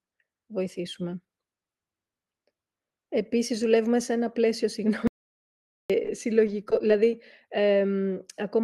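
At 5.07 s, just after "δουλεύουμε σε ένα πλαίσιο", the input was likely lost while the recorder kept writing silence, so the speech cuts to dead silence for 0.82 s with no room tone. At 6.03 s and again at 6.06 s, roughly 10 ms of the call arrived too late each time. The receiver patched each hole by extending the preceding sound, leaving brief smears or wobbles. From 6.47 to 6.90 s, repeated packet loss left a cluster of short holes, none longer than 10 ms and together about 12% of the stretch. Back-to-back concealment makes this passage choppy. All of this passes through a call codec whose coding noise and cut-off near 12 kHz point to Opus.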